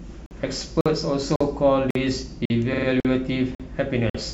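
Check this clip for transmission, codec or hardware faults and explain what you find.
The speech has two faults: regular dropouts between chunks, and a short stutter from repeated frames.

Gap between chunks: silent holes of about 48 ms start at 0.26, 0.81, 1.36, 1.91, 2.45, 3.00, 3.55 and 4.10 s. The audio arrived in half-second chunks, and silence was inserted at each join, so nothing is lost but the flow is broken. You hear a steady, hard-edged chopping. On a waveform these are flat, near-silent strips with abrupt edges. On a spectrogram they are evenly spaced blank vertical bands cutting across all frequencies.

Repeated frames: from 2.73 to 2.87 s, a 46.4 ms block of compressed audio is played three extra times, adding 139 ms to the clip. The block's length points to two codec frames being written or sent more than once. The decoder replays them, so you hear a rapid stutter. A waveform shows the same shape tiled four times in a row. 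A spectrogram shows an identical pattern repeating.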